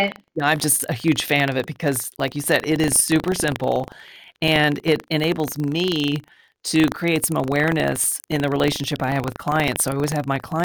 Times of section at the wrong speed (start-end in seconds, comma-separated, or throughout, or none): none